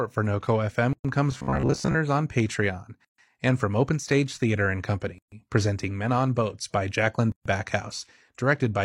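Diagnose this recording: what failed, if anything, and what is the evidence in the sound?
Codec stage: gaps at joins of encoded pieces. Silences open in continuous speech at 0.93 s (117 ms), 3.05 s (136 ms, just before "and from"), 5.18 s and 7.32 s (136 ms each), recurring every 2.0 s. Separately encoded pieces were concatenated untrimmed, leaving encoder delay and final-frame padding as silence with edges smeared by the codec.

Driver or buffer stage: robotic sound from repeated short buffers. From 1.32 to 1.98 s the speech becomes a rigid metallic buzz at 66.8 Hz, which fits a repeated block of about 15 ms. The likely cause is buffer underrun, with roughly half the audio replaced by repeats and the real audio skipped.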